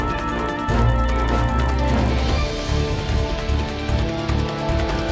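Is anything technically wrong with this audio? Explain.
Yes. Throughout the clip, a resampler restarted on every block treats each 20 ms block in isolation, so edge errors produce a 50 Hz buzz under the signal, consistent with 44.1 kHz to 16 kHz conversion.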